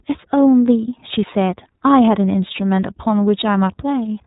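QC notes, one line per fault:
Throughout, iLBC codec. The speech is band-limited, with nothing heard above 4 kHz, so it sounds muffled and telephone-like. Each 30 ms block is coded on its own, without drawing on the block before. That gives the voice a plainly audible rough, buzzy, slightly synthetic grain. The damage fits the codec's 13.33 kbps, 30 ms frame mode.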